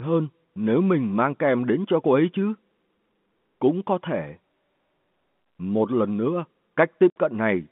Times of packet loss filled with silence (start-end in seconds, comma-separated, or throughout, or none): 7.10-7.16